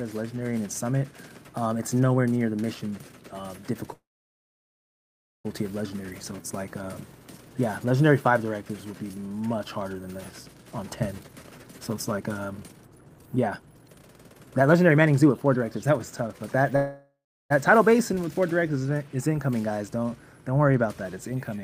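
A call audio freeze runs from 3.93 to 5.46 s. The sound briefly carries on as a fading buzz, then drops to silence for about 1.4 s before resuming exactly where it stopped, with nothing lost. This points to delayed packets likely draining the jitter buffer, so the receiver filled the wait and pushed everything after it about 1.5 s later.

From 11.23 to 16.65 s comes a jitter buffer speed-up. The audio plays about 26% faster at unchanged pitch and sounds hurried. The receiver had more audio queued than it wanted, so it cut many short pitch-period slices in succession, trimming roughly one and a half seconds of delay.

A second call audio freeze follows at 16.76 to 17.52 s. This time the filled tail lasts longer, fading over roughly 0.4 s before about 0.34 s of silence. Playback then picks up intact, about 0.74 s later than before, again likely because late packets left the buffer empty.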